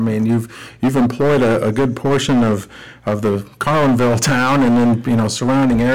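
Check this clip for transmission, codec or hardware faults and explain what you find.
There is one fault, and it lasts the whole clip: hard clipping. Every louder stretch of speech carries a harsh, gritty fuzz, not occasional crackle. The signal was driven about 15 dB beyond what a stage could pass, so around a fifth of the samples are cut flat at the limit. Those squared-off peaks add harmonics high up the spectrum.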